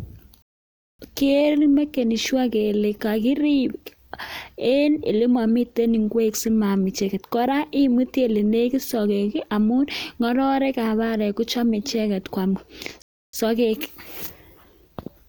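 At 0.42 s the speech drops into silence and picks up again at 0.99 s, a rebuffering stall that adds about 0.57 s. A second stall runs from 13.02 to 13.33 s, adding 0.31 s. In both, the player exhausted its downloaded audio and paused until more data arrived. Playback then resumes at the exact point it halted, so no speech is lost; the gaps only stretch the timeline.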